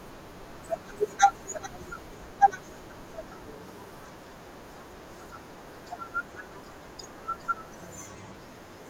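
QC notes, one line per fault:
0.35–8.64 s, word clock ticks: an unlocked receiver clock, roughly 40 ppm off, slips one sample about every 0.7 s, putting some fifteen steady ticks into the speech.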